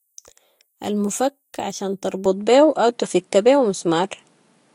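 At 2.26 s the speech abruptly turns duller, with nothing left above 11 kHz, a level shift of around 5 dB and a faint new background noise. There's no gap at the change, so the input was likely switched to a poorer device that ran to the end.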